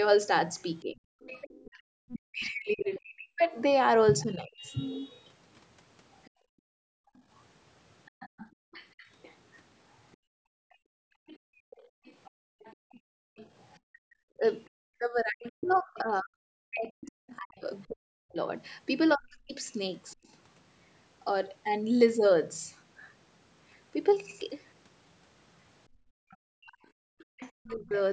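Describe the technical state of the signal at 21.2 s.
At 21.2 s the speech is intact, with only the ordinary call microphone processing audible, which trims the lowest bass and carries nothing above 8 kHz.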